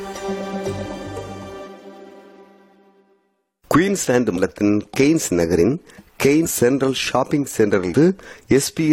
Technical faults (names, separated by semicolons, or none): compressed frames skipped